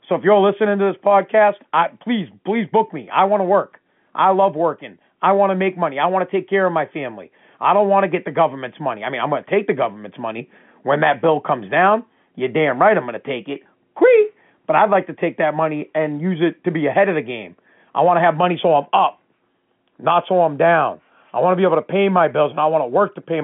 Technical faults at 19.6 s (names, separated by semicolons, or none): none